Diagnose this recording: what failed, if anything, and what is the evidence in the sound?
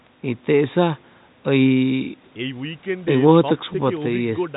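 Nothing failed: the speech comes through the call's microphone processing and a G.711 mu-law codec with nothing above 4 kHz, and no stage shows a fault.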